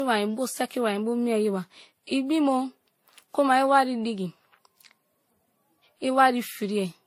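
Throughout, the speech was likely transcoded between lossy codecs in turn, so the different artefacts of each codec pile up together, with nothing above 16.7 kHz.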